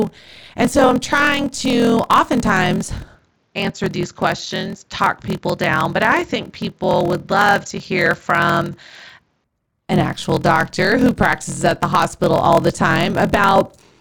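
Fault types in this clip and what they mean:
Block size mismatch (padded): One stage hands over shorter blocks than the next one reads, which fits 1024-sample blocks being zero-padded. The gaps produce a steady 41.7 Hz buzz throughout, and the speech plays at 0.889 times normal speed while keeping roughly its normal pitch.
Input switched to a poorer device: The system likely changed to a lesser input from 3.15 s, right after "I'm trying to oftentimes", to 9.44 s, before "an actual doctor who". The speech turns duller, with faint new noise about 50 dB down.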